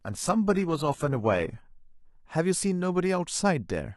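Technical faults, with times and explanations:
0.0 to 2.0 s, adaptive stream starting at a low bitrate: the speech opens thin and swirly with a synthetic treble, pointing to 16 kbit/s HE-AAC while the player gauged the connection. At 2.0 s it snaps to crisp quality, fitting 96 kbit/s AAC-LC, with no gap.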